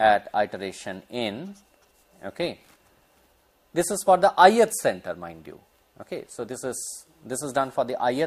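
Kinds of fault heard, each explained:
No faults can be heard anywhere in this clip.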